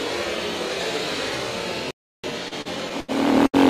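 At 1.91 s the player likely ran out of data or was blocked, producing a playback stall: the sound cuts to silence for about 0.33 s before resuming at 2.24 s. From 2.48 to 3.10 s, packets kept arriving late, emptying the jitter buffer four times, causing repeated stalls (stutter). About 163 ms, roughly a quarter of that stretch, is held-over sound, with the longest gap 82 ms, so the audio drags unevenly. At 3.47 s one late packet causes a short stall: the last sound is stretched about 70 ms until 3.56 s, with a slight buzz or dip.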